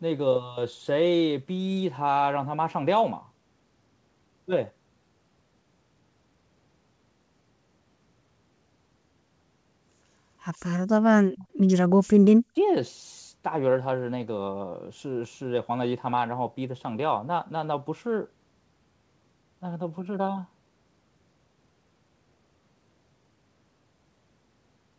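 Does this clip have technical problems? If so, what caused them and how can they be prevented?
Yes. From 11.37 to 11.47 s a faint copy of the speech trails the original by 139 ms. This is an echo leak, likely from a loudspeaker on one side whose echo canceller let part of its microphone pickup return. Headsets or better-converged echo cancellation prevent it.

From 12.26 to 12.57 s the speech nearly vanishes in a very deep dip lasting about a third of a second. This is speech suppressed in double talk, likely because the echo canceller mistook overlapping talk for echo and turned both down. Headsets or stronger double-talk detection prevent it.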